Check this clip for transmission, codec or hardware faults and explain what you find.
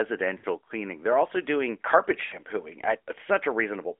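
Two short dropouts point to lost AMR speech frames. They occur from 0.38 to 0.46 s and from 2.26 to 2.37 s. Each gap is about 60 ms, which fits three consecutive 20 ms frames failing their checksum. The decoder filled the gaps by repeating the last good pitch and vocal tract settings at lowering gain. The speech smears briefly, sags in level and returns rough for a moment. The narrowband mobile channel carrying this speech passes only about 300 Hz to 3.5 kHz, with the light coding texture expected of AMR-NB at a rate near 12.2 kbps.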